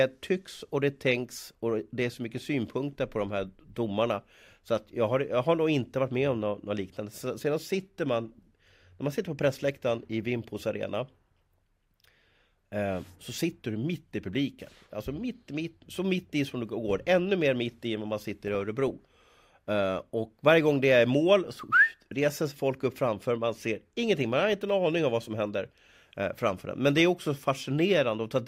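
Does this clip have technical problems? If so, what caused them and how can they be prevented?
Yes. This speech clip has DAB burbling from weak digital radio reception. At 18.48 to 18.91 s and again at 24.43 to 24.53 s, about three bit errors in every thousand slipped past the error correction into the MP2 audio data, corrupting samples so that short blips of noise appeared in individual sub-bands. You hear burbling noise over the speech, longer in the first burst. Better antenna placement or a stronger multiplex signal would prevent it.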